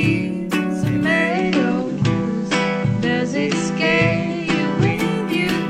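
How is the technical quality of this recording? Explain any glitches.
The recording has one clear glitch: a digital radio blending to analogue episode from 1.24 s to 5.02 s. The receiver lost its digital stream and cross-faded over 118 ms to the station's FM broadcast, then back. During that stretch the level shifts by about 1 dB, and a faint hiss sits well below the signal. The brief cross-fade and the arriving hiss set it apart from a plain codec low-pass or a dropout.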